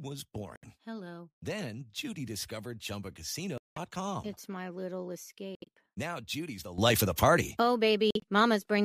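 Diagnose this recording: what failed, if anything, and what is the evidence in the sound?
Codec stage: corrupt frame muted. Abrupt silent holes at 0.56–0.65 s, 3.58–3.77 s, 5.55–5.69 s (right after "my little") and 8.11–8.24 s, each a whole multiple of roughly 25 ms frames. Damaged compressed frames were rejected by the decoder and replaced with silence, with timing preserved.

Playback or processing chain: sudden gain jump. At 6.78 s the level steps up by about 12 dB with no ramp and stays there to the end. Speech and background noise rise together, so this is likely a digital gain setting or bit shift applied instantly.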